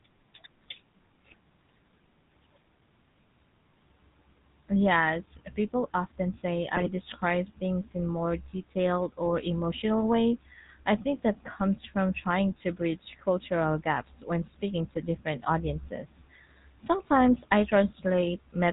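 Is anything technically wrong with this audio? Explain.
Yes, two things. The whole clip has gone through the GSM full-rate codec, and the codec damage is plainly audible. The sound is band-limited to 4 kHz and has that buzzy, gravelly roughness, which fits the 13 kbps full-rate coder modelling the vocal tract and rebuilding the excitation from regularly spaced pulses using only every third sample.

There are also two short bursts of GSM bit errors. One is at 6.76 to 6.89 s, just after "people often say". The other is at 14.92 to 14.98 s, between "cultural gaps when speaking" and "different audiences". Flipped bits corrupt the decoder's filter, pitch or gain values for a few frames, so the speech briefly breaks into squawky, gargling junk.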